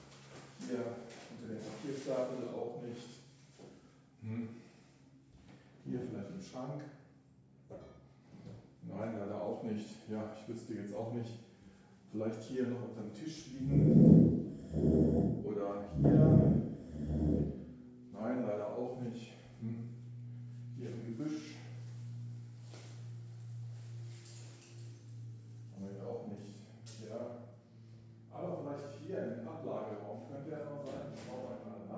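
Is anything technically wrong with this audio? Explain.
No, nothing technically wrong stood out when listening to this audio.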